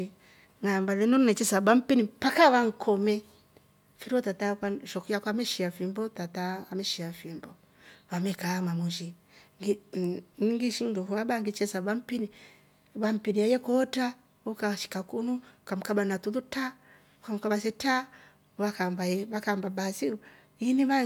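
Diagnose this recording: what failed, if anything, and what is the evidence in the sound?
Nothing in this speech recording points to a failure at any stage of the chain, so there's nothing here to diagnose.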